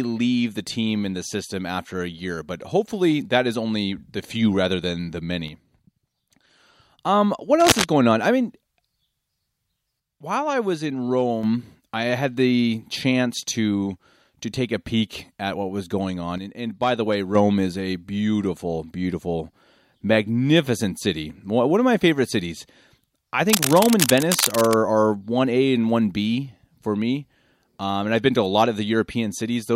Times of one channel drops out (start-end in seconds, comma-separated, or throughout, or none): 5.48-6.99, 10.00-11.43, 16.38-17.35